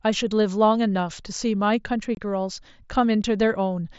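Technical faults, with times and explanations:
2.15 to 2.17 s, unconcealed Bluetooth headset packet loss: for about 22.5 ms the speech simply stops, then resumes with no smoothing, leaving hard edges. The gap's length fits three consecutive 7.5 ms headset packets dropped between headset and phone, with silence or an idle pattern substituted rather than patched over. On a waveform this is a flat notch with vertical walls; on a spectrogram, a thin blank column cutting through the wideband mSBC content.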